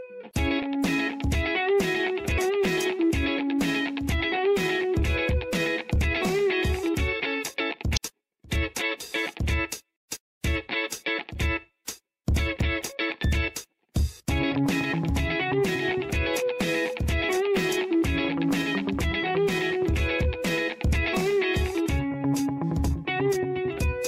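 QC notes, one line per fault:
7.93–7.98 s, damaged data in a compressed stream: a burst of about 48 ms breaks into the sound as a short glitch. Corrupted bytes made the decoder misread these frames. It lost sync and had to hunt for the next valid frame header.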